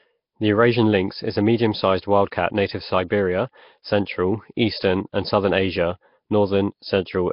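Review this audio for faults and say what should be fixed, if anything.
The whole clip has a rough, hissy halo and a smeared, underwater tone. Nothing is heard above 5.3 kHz. This is likely Nellymoser compression, heavily applied, fitting a bitrate near 22 kbps. Fixed bits per sample starve weak bands, which get noise instead. Record or transmit with a modern codec at a higher bitrate.

Pre-echo appears from 3.08 to 3.10 s, just after "wild cat native to". A short hiss of about 23 ms precedes a sharp attack. Its onset sounds softened. The codec spread the block's noise into the quiet moment before the attack. Use a codec with shorter blocks for transients.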